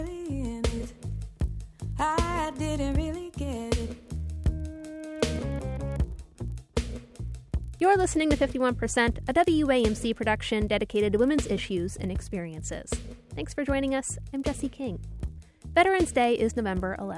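From start to finish the audio carries a resampler restarted on every block. Each 40 ms block was converted separately, likely from 48 kHz down to 24 kHz, so the filter lacked neighbouring samples at every edge and left a small error there. The result is a steady 25 Hz ticking buzz that rides on the signal and falls away when the sound stops. That is what distinguishes it from mains hum, which persists in silence, and from dropouts, which leave audible gaps.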